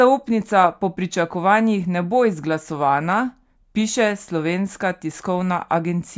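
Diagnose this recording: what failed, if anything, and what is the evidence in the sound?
Nothing failed; no stage of the chain shows audible trouble.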